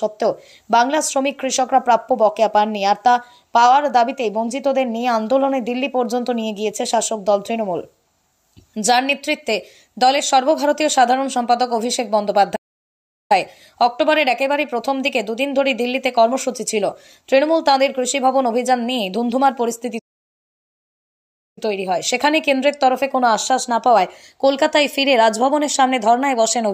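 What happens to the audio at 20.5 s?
At 20.5 s the sound is in the middle of a playback stall, a dead gap running from 19.98 s to 21.58 s, about 1.6 s long. The output cuts off mid-flow and resumes afterwards, most likely because the player ran short of data or its thread was blocked until it recovered. On the waveform the trace drops to a flat line for that stretch, and the spectrogram shows a clean vertical band of empty silence with abrupt edges on both sides.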